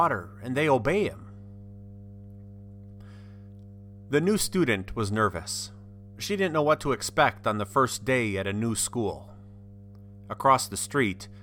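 Mains hum runs under the speech from start to finish. A steady low tone sits at 50 Hz, with some low harmonics above it. It stays roughly 20 dB below the speech. Power-line current is leaking into the signal, through a ground loop or a nearby transformer.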